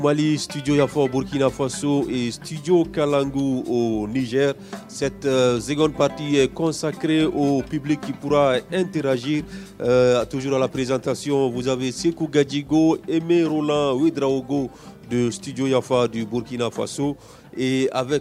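Nothing in the recording registers as a technical fault at any point.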